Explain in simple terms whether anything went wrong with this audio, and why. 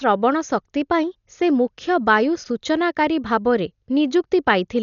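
Yes: the speech sounds dull from start to finish, with nothing above about 6.9 kHz and rough, fluttering hiss around voiced sounds, likely from heavy Dolby Digital compression rather than simple muffling.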